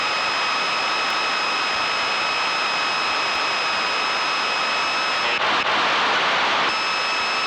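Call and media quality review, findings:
Overlapping chunks: stutter at regular spacing, 1.10–1.35 s, 3.35–3.60 s, 5.60–5.85 s. Each join replays 250 ms of sound already heard. Probable component: chunked processing or transport stage re-sending a tail with each 2 s block. Mechanism: every new chunk begins 250 ms before the previous one ended, so the overlap plays twice, producing a repeat roughly every 2.25 s of playback. Check the framing offset and hop size at chunk boundaries.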